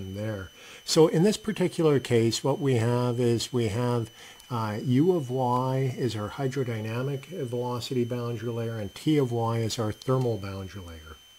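Throughout the clip a switching supply whistle sits under the sound: a high tone near 3 kHz, wandering between about 2.96 and 3.12 kHz, roughly 30 dB below the signal. A switching power supply running in an audible burst mode, or beating with another supply, puts its ripple into the audio path.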